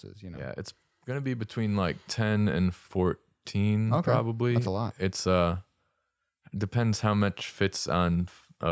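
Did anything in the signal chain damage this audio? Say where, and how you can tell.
Yes. Automatic gain rising from 0.2 to 2.49 s, in the call processing stage: the voice and background noise swell together by about 8 dB over those two seconds, as the call's automatic gain control, finding the input too quiet, gradually raises its gain.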